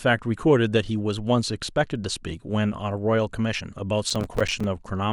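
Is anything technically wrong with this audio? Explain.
Yes. From 4.10 to 4.64 s the speech carries processor overload crackle: the processor repeatedly misses its buffer deadlines, and each late buffer of about 5 ms becomes silence. Around fifteen hard-edged gaps fire in quick succession, a gritty tearing rather than one clean dropout.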